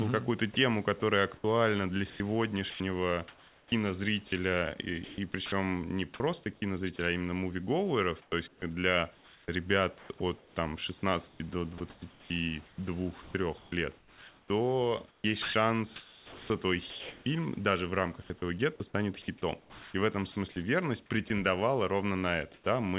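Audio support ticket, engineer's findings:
Voice detector chopping the speech, 0.54–5.52 s, 8.22–17.26 s (after "кинозрителя а именно мувиговеров", ending at "даже в"), 19.6–20.36 s (after "этого гетто станет хитом"). Quiet syllables and word edges swapped for synthetic fill, about 1 s, 3.4 s and 0.38 s in total. Likely the sender's VAD gating on and off. Choppy.

Voice detector dropping the speech at 6.44–6.46 s (just before "кинозрителя а именно мувиговеров"), 21.28–21.3 s and 22.54–22.66 s. Short bits of speech, roughly 10, 20 and 50 ms, swallowed and replaced with steady noise until the speech picks back up. Likely the VAD reading soft speech as background.

Comfort noise in place of the background, 18.22–18.3 s. The real room tone gets swapped for a flat, featureless hiss about 5 dB quieter for 80 ms, then the real background returns. Likely DTX kicking in during the pause. Narrowband G.711 path, nothing above 4 kHz, so the fill is band-limited too.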